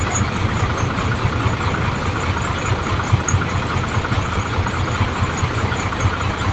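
The everyday sounds carry nothing above 8 kHz, which fits the band limit of a wideband call path, and nothing in the signal stands out as a technical fault.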